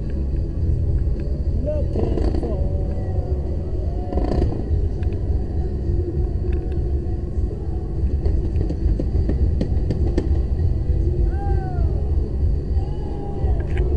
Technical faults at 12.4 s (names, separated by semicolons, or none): none